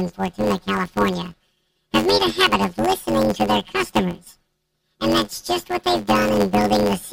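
A speech recording carries a planar audio read as interleaved fault throughout: each 10.88 ms block of left-then-right samples plays as two double-speed halves, giving a robotic buzz near 92 Hz without a clear octave shift. A spectrogram shows vertical striations every 10.9 ms, and the waveform repeats in short chunks.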